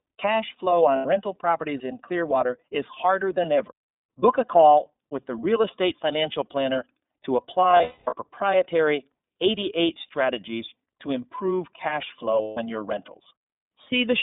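The whole clip runs through the iLBC codec. The speech is squeezed into a 200 Hz to 3.7 kHz line band and has a plainly rough, slightly synthetic edge. That fits iLBC's 30 ms frame mode at around 13.3 kbps, where each frame's excitation is coded on its own.

There are also lost iLBC frames, where the decoder fills each gap by repeating the last pitch cycle with some noise mixed in. At 0.96 to 1.06 s, just before "rental properties in", 90 ms drops out as a short buzzy hold. Between 7.71 and 8.14 s, 330 ms goes missing in scattered chunks, the longest run around 200 ms, so you hear a breathy vowel that fades. At 12.42 to 12.58 s, right after "strategies to improve cash", a 150 ms gap does the same thing. Each time, the speech recovers almost immediately.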